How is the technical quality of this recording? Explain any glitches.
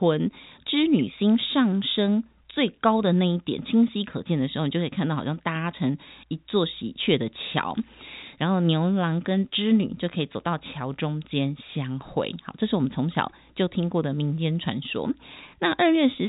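No glitches can be heard in the recording. The speech carries the narrow sound of G.711 telephone coding, which fits A-law at 64 kbps, with nothing above about 3.8 kHz and at most a faint codec trace.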